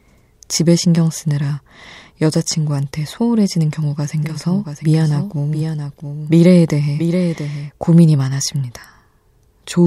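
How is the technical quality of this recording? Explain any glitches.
A doubled audio track runs from 4.23 to 7.71 s. A second, full-band copy of the speech sits about 0.7 s behind the original and roughly 5 dB quieter. It most likely comes from the signal being captured twice, once through a slower path. Unlike an echo or reverb, the copy is a single clean repeat with no decay or room colouring, and it cuts in and out abruptly at both ends.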